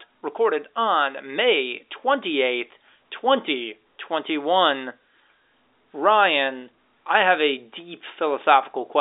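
No technical faults are audible.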